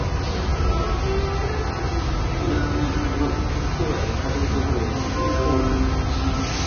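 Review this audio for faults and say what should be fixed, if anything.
Across the whole clip the sound is hissy and grainy, with roughened tones and blurred attacks, and nothing is present above 6.5 kHz. Likely cause: heavy Vorbis compression, consistent with a bitrate near 18 kbps, replacing fine treble detail with similar-energy noise. A spectrogram would show a hard shelf at 6.5 kHz and mottled, smeared texture beneath it. Prevent this by re-encoding from the original at a much higher Vorbis quality setting.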